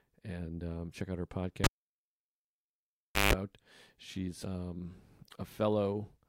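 At 1.64 s, after "um check out her", a cable is pulled and plugged in. A pop is followed by about 1.6 s of near silence. A 157 ms burst of 50 Hz mains buzz comes as only the tip touches. Another pop restores sound at 3.33 s.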